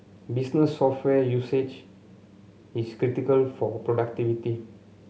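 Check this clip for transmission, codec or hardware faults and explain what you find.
Nothing in the speech signal points to a transmission, codec or hardware problem; it arrives intact and continuous with no audible disturbance at any point.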